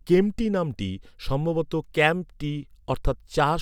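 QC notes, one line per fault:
Nothing to flag on this speech clip, so there's nothing to log here.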